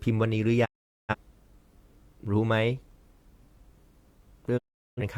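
At 0.64 s the speech fades out in about 20 ms and stays silent until 1.15 s, and the same happens again from 4.57 to 5.02 s. These are digital broadcast dropouts. The receiver stopped getting good frames and muted until valid ones returned, roughly ten frames' worth each time. Unlike an edit gap or concealment smearing, the programme resumes further along with the missing speech simply gone, and each silence opens with a short fade rather than a hard click.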